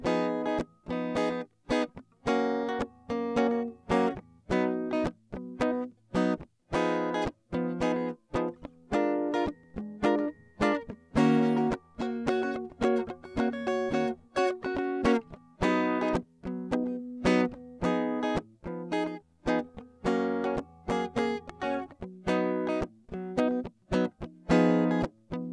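Nothing in this music trips the ear at any point, so there's no technical fault to point to here.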